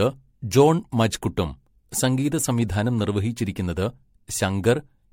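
Generation loss runs through the whole clip. The speech sounds swirly, smeared and hollow, and consonant attacks blur. Nothing is left above 16.5 kHz. This likely comes from MP3 being decoded and re-encoded about four times, each pass adding fresh quantisation noise, which fits a 64 kbit/s stream.

Sample clock jitter is also present throughout. The converter's clock wanders by roughly a microsecond or two, so samples land slightly off time. This adds a fine hiss and roughness, about 35 dB below the speech, that grows with loud, bright sounds and fades in pauses.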